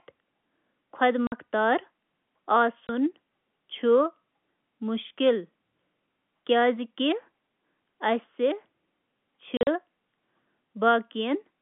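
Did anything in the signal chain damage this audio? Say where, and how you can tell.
Yes, the damage is at the network stage: packet loss filled with silence. The speech drops to dead silence at 1.27 to 1.32 s (50 ms), at 2.88 to 2.89 s (20 ms), and from 9.57 to 9.67 s, where 80 ms of gaps are scattered across 100 ms, the longest run being 40 ms. Hole lengths step in 10 ms units, which fits 10 ms packets. The receiver substituted zeros with no concealment, leaving hard-edged gaps. The narrowband G.711 telephone line band is audible.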